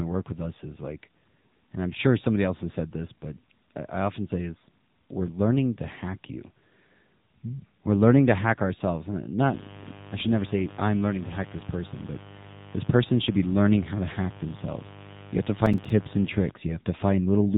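AMR narrowband mobile codec damage runs through the whole speech clip. The audio was squeezed into the 2G/3G speech codec, which samples at 8 kHz and rebuilds the voice from a vocal-tract model excited by a few pulses per short subframe. Nothing above 3.8 kHz survives, so the voice sounds boxed-in and telephone-like. The plainly buzzy, synthetic texture fits a low rate of around 8 kbps, too few bits to model the voice faithfully.

Mains buzz enters at 9.44 s, right after "to hack ourselves and", and continues until 16.51 s. Sharp switching spikes from a 50 Hz supply, arriving twice per cycle, leak into the signal, perhaps through a dimmer, a rectifier or a missing shield. Their harmonics stack up from 50 Hz into the kilohertz range, so the result is a steady, raspy buzz rather than a pure hum. It sits about 20 dB below the speech and stays audible throughout that stretch.

Processor overload crackle erupts from 15.66 to 15.90 s, while the buzz is still running. 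The processor fell behind and missed a handful of buffer deadlines, which fits buffers of around 5 ms each. Each missed buffer was filled with silence, and every one of those gaps has hard edges. Strung together within a quarter of a second, they produce a gritty, tearing crackle over the sound that stops once the load eases.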